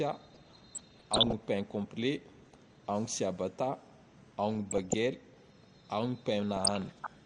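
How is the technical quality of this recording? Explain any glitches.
The recording is clearly degraded: the speech sounds dull and grainy throughout, and four stretches are broken up by bursts of interference.

MP2 compression runs through the whole clip. The top end sounds muffled, and a gurgling, granular roughness clings to the speech. This is likely low-bitrate MPEG Layer II coding, with the damage level fitting a rate around 80 kbps. The coder divides the spectrum into 32 sub-bands and shares out a limited bit budget, so upper bands drop out and the remaining ones are quantised coarsely.

DAB burbling occurs from 0.34 to 1.33 s, 2.24 to 2.55 s, 4.55 to 4.94 s and 6.57 to 7.07 s. Each burst lays short blips of noise over the speech. The first burst is the longest and roughest. Reception errors of roughly 0.4 to 0.7 percent of bits got past error correction into the audio data. Corrupted samples then put short blips of noise into single sub-bands.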